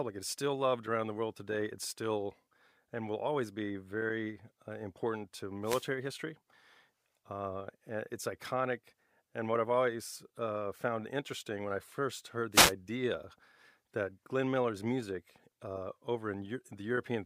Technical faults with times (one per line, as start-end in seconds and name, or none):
5.63-5.87 wireless microphone noise hit
12.52-12.73 wireless microphone noise hit